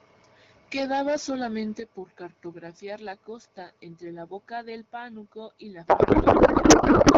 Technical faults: microphone overload; microphone volume stepped down; codec payload misread

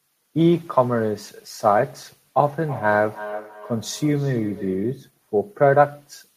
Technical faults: feedback echo between two devices

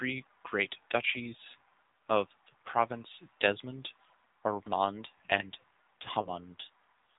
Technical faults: AMR narrowband mobile codec; lost AMR speech frames

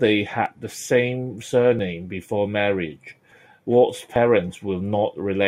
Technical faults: dropped buffer (overrun)

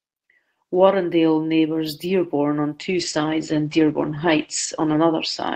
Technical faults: call bitrate drop

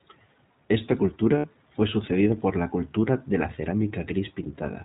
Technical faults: iLBC codec; lost iLBC frames

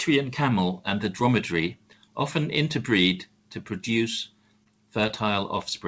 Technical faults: short concealed packet loss

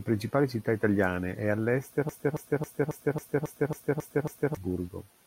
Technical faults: broken-record loop

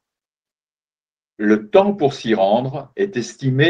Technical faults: none

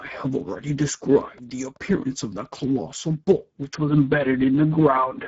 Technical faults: Speex codec; train of clicks; input switched to a poorer device

